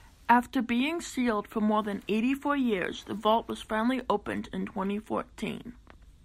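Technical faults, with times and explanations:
No technical faults are audible in this speech recording.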